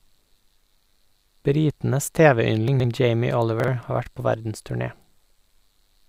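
A brief jumbled stutter at 2.68 to 2.84 s and a shorter one at 3.60 to 3.68 s, just before "har vært på verdensturné", come from chunks out of order: a 40 ms chunk played three chunks late, then one chunk late, leaving hard joins.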